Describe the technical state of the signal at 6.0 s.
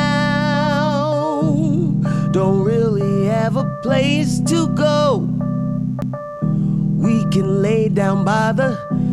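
A CD skip hits at 6.01 s: the laser jumped tracks, so a very brief mute and tick precede a sudden jump, seen as a gap and waveform discontinuity. Throughout, a 50 Hz mains buzz sits roughly 35 dB below the signal, switching spikes stacking harmonics that show as evenly spaced horizontal spectrogram lines.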